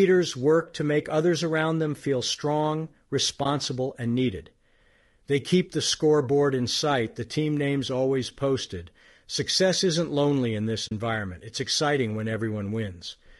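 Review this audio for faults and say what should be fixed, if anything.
The speech sounds rough and grainy throughout, with a hiss-like fill between the harmonics and a thin, artificial top band. This is plainly audible codec damage, likely from low-delay AAC compression of the AAC-ELD kind used in video calls. Its short frames resolve pitch harmonics poorly and spend bits quickly. At a rate that fits roughly 32 kbps, too little is left for clean voice detail. Prevent it by raising the bitrate or using a codec mode with longer frames.

There are two short holes from AAC frame loss with muting. The first runs from 3.43 to 3.46 s and lasts about 20 ms, which points to one lost frame. The second runs from 10.87 to 10.92 s and lasts about 40 ms, which points to two. The decoder zeroed the missing spectrum. The overlapping windows fade the sound down and back up, so each gap has soft edges. 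Prevent it with a steadier network path or forward error correction.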